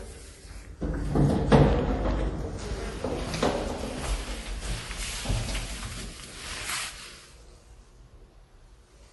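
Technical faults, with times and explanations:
Throughout: MP3 compression. Nothing comes through above 11.5 kHz, so the top end just stops dead and the audio sounds dull and closed in. There's plainly audible codec damage too, a watery, swirly texture where quieter detail flickers in and out between frames. That's likely an MP3 encoder short on bits, lopping off the treble and dropping weak frequency lines, which fits a low bitrate of around 48 kbps.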